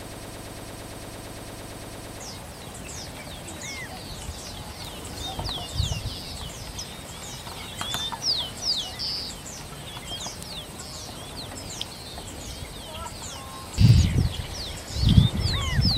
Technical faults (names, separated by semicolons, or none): broken-record loop